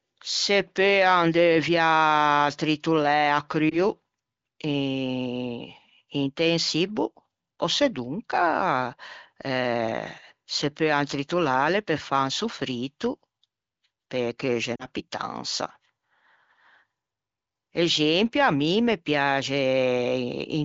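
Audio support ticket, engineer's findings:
Lost AMR speech frames, 3.69 s: brief dip or warble, sounding like a single 20 ms frame dropped. Decoder concealment reuses the last good pitch and vocal tract settings at reduced gain. Waveform shows a short amplitude sag; spectrogram shows smeared, flattened harmonics.

Lost AMR speech frames, 14.75 to 14.86 s: quick drop to near silence, consistent with two consecutive lost frames, with gain falling. Recovery is briefly weak or rough. Spectrogram shows harmonics fading quickly toward the gap; waveform envelope droops, then recovers.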